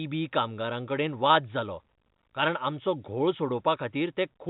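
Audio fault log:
No faults found in this speech recording.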